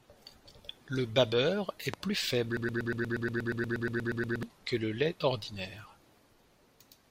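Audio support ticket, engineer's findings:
Loud pop, 1.94–1.96 s. Single sharp pulse roughly 15 dB above the speech, which continues underneath. Likely a voltage step from a plug, switch, static discharge or driver glitch, shaped by downstream circuitry into a brief thump.

Broken-record loop, 2.57–4.43 s. A 119 ms fragment repeats back to back about sixteen times; the audio for that span is lost. Likely a stalled player, encoder or stream resending its last buffered fragment until recovery.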